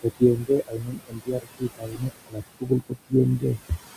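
From the start, the background noise rises and sinks with the talking. These are noise suppressor artifacts: the suppressor pulls down each band it judges to be steady noise, frame by frame, cutting the noise by about 19 dB. The room noise, itself about 13 dB under the speech, is chopped into moving patches rather than left as an even bed.

Across four stretches the speech itself goes faint, with soft consonants and word endings swallowed: 0.03 to 0.5 s, 0.67 to 2.43 s, 2.59 to 3.13 s, and 3.39 to 3.71 s. This is speech cut by the noise suppressor. It mistook quiet parts of the speech for noise and turned them down with the background, by up to about 20, 22, 22 and 18 dB. The longest stretch loses well over a second of speech in total, the others about a tenth to a few tenths of a second each.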